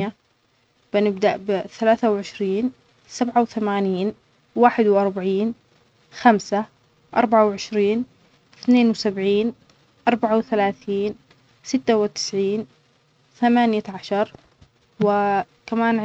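Speech, marked by two Bluetooth SBC bit pool drops, from 1.42 to 4.39 s and from 12.61 to 14.66 s. In both stretches the treble goes dull and a gritty noise rises under the speech. Then the sound recovers. A congested wireless link made the sender cut the SBC bit pool. That starved the upper sub-bands and coarsened the rest. The change fits a drop from a bit pool of 31 to about 15, near 105 kbps.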